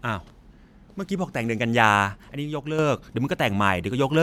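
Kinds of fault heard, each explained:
Sudden gain jump: at 2.32 s the level drops by about 6 dB in a single step, speech and background noise falling together, then snaps back at 2.79 s. That's most likely a gain setting applied instantly with no ramp to smooth it.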